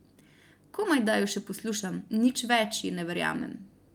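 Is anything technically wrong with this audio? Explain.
No, nothing is technically wrong with this audio. The speech comes through without any audible technical problem.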